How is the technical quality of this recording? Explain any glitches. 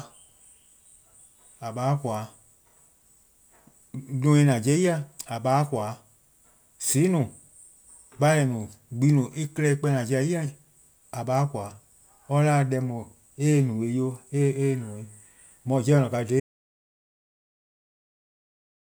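One fault affects the recording, at the very end. From 16.4 s, an audio dropout to silence runs to the end: the input was likely lost, leaving silence without room tone, a flat waveform and a blank spectrogram.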